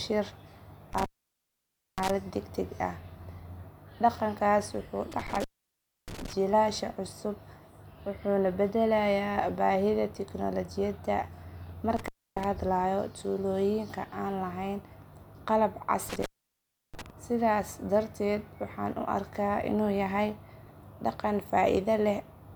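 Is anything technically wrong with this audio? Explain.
Yes. Intermittent contact in the speech at 0.93–2.10 s, 5.12–6.33 s, 11.97–12.44 s and 16.09–17.10 s: a loose connection opens for about 0.92 s, 0.64 s, 0.28 s and 0.68 s, dropping the signal to faint hiss between crackles.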